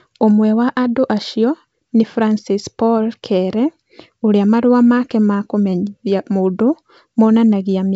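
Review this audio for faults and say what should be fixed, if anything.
Nothing here needs fixing: it's a speech recording carried over G.722 wideband telephone coding at 64 kbit/s, with content reaching up to about 7.7 kHz, and no faults turn up anywhere in it.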